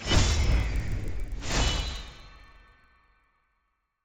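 From start to end, a resampler restarted on every block converts 16 kHz to 48 kHz in separate 40 ms chunks, leaving an edge error each time: a steady 25 Hz ticking under the signal. The waveform shows small regular glitches; a spectrogram shows faint vertical stripes 40 ms apart.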